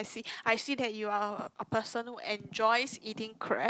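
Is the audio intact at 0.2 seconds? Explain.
Yes, at 0.2 seconds the speech is intact, with nothing there beyond the ordinary coding of a WebRTC call path.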